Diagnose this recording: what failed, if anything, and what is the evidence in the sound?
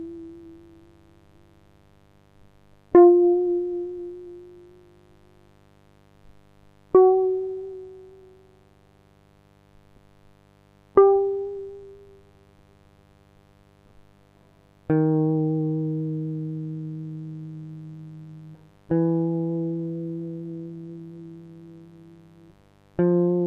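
The analogue wiring failed. A mains buzz runs under the music from start to finish. It is steady and raspy, sitting well below the music. It is built on 50 Hz, with harmonics up to several kHz. Switching spikes from a dimmer, rectifier or unshielded cable entered the signal path twice per mains cycle.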